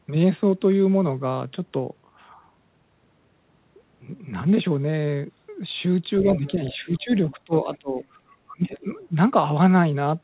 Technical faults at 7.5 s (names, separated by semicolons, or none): speech suppressed in double talk